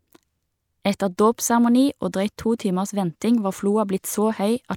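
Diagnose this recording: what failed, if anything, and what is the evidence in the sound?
At the codec stage, a corrupt frame was decoded: from 0.93 to 0.95 s the speech breaks into a brief chirp, squeak or burst of noise. Flipped bits in a few compressed frames gave wrong gains and codes, which a spectrogram shows as a short smear of misplaced energy.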